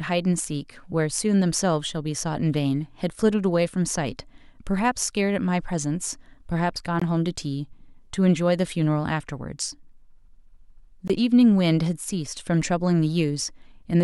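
Speech, with two short holes in the sound. The first runs from 7.00 to 7.02 s, the second from 11.08 to 11.10 s. Each gap lasts about 20 ms. The speech cuts out, abruptly or with a fade of a few milliseconds, and then returns as if it had kept going underneath. This is likely a Bluetooth dropout. Audio data missed its deadline at the headphones and was discarded. The output fell silent until the next good data arrived. Each gap fits a single lost packet.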